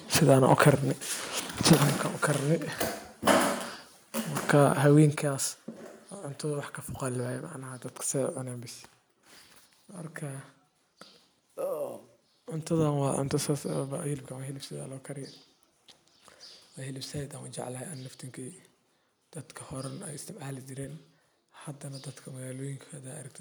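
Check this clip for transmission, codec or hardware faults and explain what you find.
Two things stand out: some clipping near the start, then a couple of sudden level drops.

Microphone overload, 0.29 to 0.7 s and again 1.7 to 1.73 s: peaks crackle harshly, about 4 dB and 3 dB over, likely input gain driving the converter past full scale.

Microphone volume stepped down, at 1.73 s and 5.16 s: speech and background fall abruptly by about 4 dB, then about 7 dB, likely software cutting mic gain after loud or clipped input.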